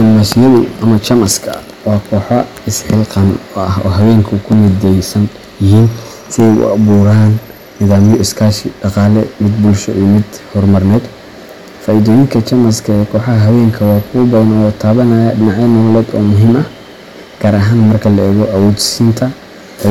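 Hard clipping runs through the whole speech clip. The signal was driven about 13 dB past what one stage could pass. Every peak hits that ceiling and is sliced flat. Roughly one sample in twenty is cut off this way. The flat tops create harmonics high in the spectrum that were never in the original. The result is a harsh fuzz on every loud syllable, not just an occasional crackle.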